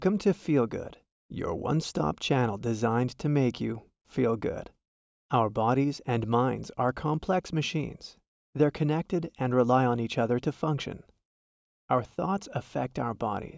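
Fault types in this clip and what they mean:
No faults can be heard anywhere in this speech recording.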